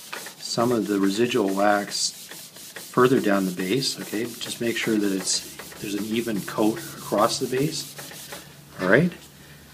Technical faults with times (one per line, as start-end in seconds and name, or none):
none